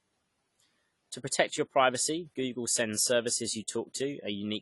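Speech with plainly audible AAC compression damage throughout, dull and smeared; a spectrogram shows nothing above 11.4 kHz, likely from AAC-LC encoding at a low bitrate around 32 kbps.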